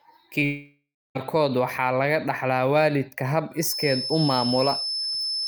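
Right at 0.39 to 0.43 s there's a short concealed packet loss: about 20 ms of the stream didn't arrive in time, so the decoder stretched the last bit of speech to cover it and then crossfaded back. You hear it as a quick smear.

Straight after, from 0.45 to 1.17 s, the sound gives way to a fading synthetic buzz or hiss, then drops to silence for roughly the last 290 ms before the speech resumes with around 0.7 s gone. That's likely a long network dropout, with the receiver padding the gap until its concealment ran out.

From 3.56 s to the end there's a thin, steady whistle at 5.3 kHz sitting a little below the speech and swelling and fading slowly in level. That's likely a feedback whistle, where the speaker-to-mic loop is hovering just at the edge of ringing without running away.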